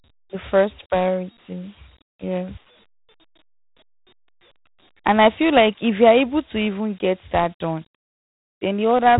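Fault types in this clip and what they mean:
Dialogic VOX ADPCM: the speech was coded as coarse 4-bit adaptive differential steps at a telephone-grade rate, which fits a 32 kbps stream. Nothing survives above 3.9 kHz, and a plainly audible gritty hiss trails the speech, leaving it dull and rough.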